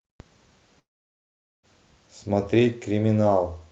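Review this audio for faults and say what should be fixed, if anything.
From 0.79 s to 1.66 s the speech breaks off: the last sound smears into a fading buzz and then gives way to near-silence for most of that stretch, before speech resumes with the missing portion simply gone. This is likely a long network dropout. Roughly 0.84 s of packets never arrived over the call path, which runs at a limit of 8 kHz. The receiver's concealment stretched the final sound briefly and then fell silent rather than inventing more. Prevent it by stabilising the network link and enabling redundancy such as forward error correction so short losses can be recovered.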